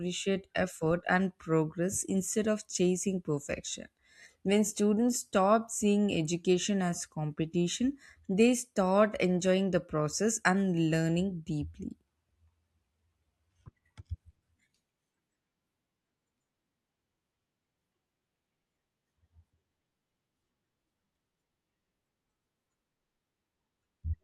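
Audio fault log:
No fault found in this speech clip.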